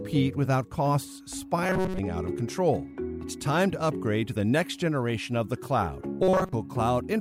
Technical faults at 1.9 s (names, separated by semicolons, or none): robotic sound from repeated short buffers